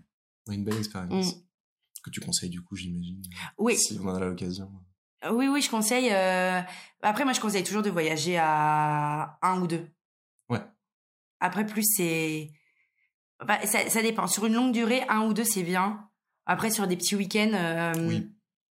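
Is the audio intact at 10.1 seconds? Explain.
Yes, at 10.1 seconds the speech plays through intact, with no dropout, click, distortion or other audible fault at that moment.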